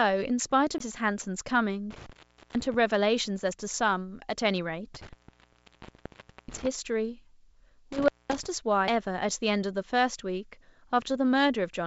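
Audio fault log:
0.78–0.80 s and 8.88 s, CD skip: at each point the playback gives a small tick and drops out for a moment, around 20 ms the first time and only a few milliseconds the second, then resumes from a different place in the speech. This is the laser losing its track after a knock or a disc flaw and landing on a neighbouring turn of the spiral, so the player mutes briefly and carries on out of sequence.
1.91–2.74 s, 4.94–6.67 s and 7.92–8.46 s, intermittent contact: the speech cuts out three times, for about 450 ms, 1.36 s and 216 ms, with crackle as each gap opens and closes. A loose plug or cable breaks the signal path for those moments, so the crackle comes from the contact scraping open and shut and only faint residual noise remains while the line is open. The speech on either side of the gaps reaches up to 8 kHz, which fits a G.722 call path.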